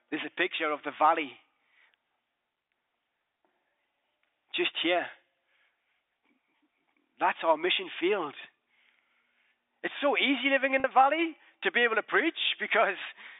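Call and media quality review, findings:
Packet loss with pitch repetition, 10.80–10.84 s, after "so easy living in": 40 ms dropped, fits two 20 ms packets; last pitch period repeated, brief buzzy hold.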